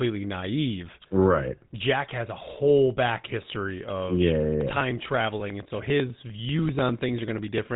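The speech has been coded with the GSM full-rate codec from start to finish, which fits a 13 kbps stream. The codec rebuilds the sound from a vocal-tract filter driven by a coarse, regularly spaced pulse excitation, keeping only a fraction of the original detail, and it discards everything above 3.8 kHz. The result is plainly audible: the speech is band-limited and muffled at the top, with a buzzy, gravelly roughness running through it.

From 4.61 s, right after "history of yeah yeah", to 7.68 s, something repeatedly blocked the USB bus or the audio driver, producing periodic USB or driver dropouts. About every 0.099 s, roughly 10 times a second, around a millisecond of audio was skipped outright, some thirty times in all. Each skip leaves a small discontinuity that is heard as a regular tick or pop riding on the speech, evenly spaced like a fast, steady ticking.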